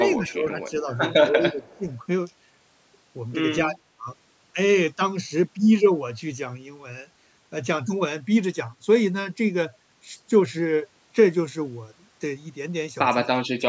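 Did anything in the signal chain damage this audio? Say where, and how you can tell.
Yes. In the call processing, the echo canceller likely mistook overlapping talk for echo and ducked the speech. The result is speech suppressed in double talk at 0.18–0.87, 1.29–1.86, 3.66–4.07 and 13.27–13.62 s, with dips ranging from roughly 10 to 25 dB.

The same call-processing stage likely let some loudspeaker pickup through its echo canceller. That echo leak is audible from 1.69 to 1.98 s as a faint copy of the speech, delayed about 240 ms and sitting roughly 30 dB below it.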